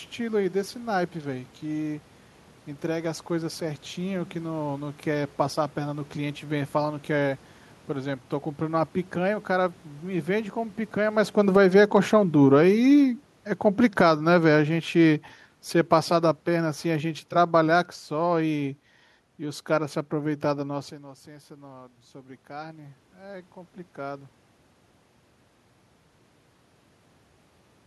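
Speech recording whose automatic gain control misbehaves three times. From 11.36 to 18.66 s, automatic gain falling cuts the level by about 12 dB, so the voice and room noise sink together, though a brief automatic gain rise of about 5 dB between 11.68 and 12.23 s interrupts the drop just after the talker shifts near 11 s. From 20.96 to 24.32 s, after the talker moves again and the input drops about 16 dB, automatic gain rising restores only about 5 dB, swelling voice and background together over several seconds.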